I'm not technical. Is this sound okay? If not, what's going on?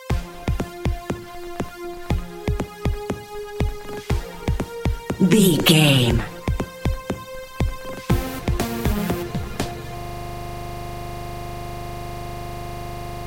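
No. At 9.98 s the computer froze, a system hang loop, so a 40 ms slice repeats 25 times a second until the end, making a steady buzz.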